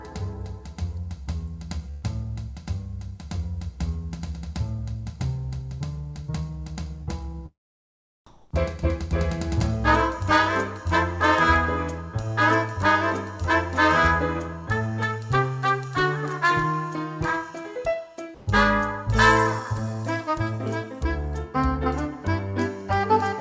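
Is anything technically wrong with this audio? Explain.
Yes, there are three kinds of transmission fault, all heard over a call codec path that leaves nothing above 8 kHz.

Burst of packet loss, 1.91 to 2.05 s: a run of packets never arrived in time, so the receiver stretched the last sound for about 114 ms while fading it. It then resumes 120 ms further on, with that stretch missing.

Short concealed packet loss, 7.03 to 7.10 s: a few packets went missing, and the decoder patched roughly 39 ms by extending what came before, replacing 30 ms of real audio. It blends back quickly, leaving a brief smear.

Comfort noise in place of the background, 8.26 to 8.51 s and 18.35 to 18.47 s: the sender likely paused transmission when it detected no speech, and the receiver synthesized stand-in noise for 240 ms and 120 ms respectively. In the first pause, where the background sits about 49 dB below the loudest parts, the substitute noise shifts the level by about 15 dB. 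In the second, with the background about 28 dB down, the level stays the same, but the real background is still swapped for synthetic noise.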